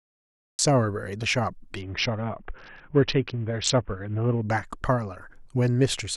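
The first 0.59 s is digital silence: a flat line on the waveform and an empty band on the spectrogram. At 0.59 s the speech starts abruptly in the middle of a sound, a cut-off start. Capture began late, so the rising edge of that sound was never recorded. There is no attack or fade-in, just a hard vertical edge in the waveform where full-level speech appears from nothing.

From 1.81 to 4.42 s the sound dulls and turns gritty, the signature of a Bluetooth SBC bit pool drop. A congested link forced the sender to cut the bits available to the codec, so the highest sub-bands were starved and everything left was quantised coarsely. On the spectrogram the upper bands thin out or vanish over that span, and the remaining energy looks speckled and noisy. The depth of the loss points to the bit pool falling from around 31 to about 6, roughly 55 kbps.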